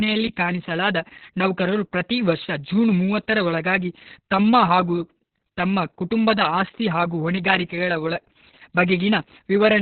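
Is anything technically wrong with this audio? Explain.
Yes. Opus voice compression runs throughout the speech. The low-rate coder models the voice with linear prediction and codes its excitation very coarsely, and nothing survives above about 4.4 kHz. That narrowband, prediction-only character points to SILK mode at a bitrate near 6 kbps. The damage is heavy: the voice sounds muffled and telephone-thin, with a hoarse, buzzy and slightly robotic roughness where fine detail in the excitation has been discarded.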